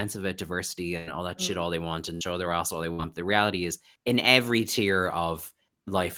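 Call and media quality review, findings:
Burst of packet loss, 0.97–1.10 s: last sound stretched and fading for about 95 ms, then speech jumps ahead with 60 ms gone. Playout delay also shifts by 35 ms here, so the jitter buffer resized mid-gap. Network drop, receiver concealment papering over it.

Same thing at 2.15–2.24 s and 2.93–3.02 s: roughly 60 ms of faded fill each, 60 ms of speech skipped. Consecutive packets lost upstream; PLC holding the tail.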